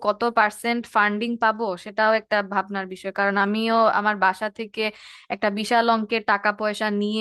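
A short speech recording, with no technical faults to report. Nothing in it calls for a time or a cause.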